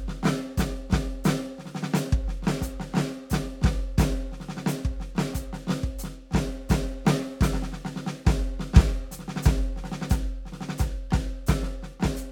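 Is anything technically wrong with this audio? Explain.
No, nothing is technically wrong with this music audio.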